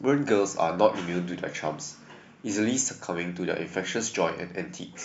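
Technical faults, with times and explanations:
No technical faults can be heard in this speech recording. Nothing calls for a time or an explanation.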